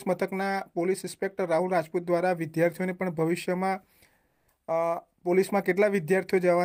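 From 4.27 to 4.47 s, about 200 ms, the background loses its texture and turns into a smooth, even hiss at the same level as before, then the real background returns with the next sound. This is comfort noise in place of the background. The likely cause is discontinuous transmission of the kind Opus uses: the sender stopped sending during a quiet stretch, about 49 dB below the loudest parts, and the receiver filled the gap with synthetic noise.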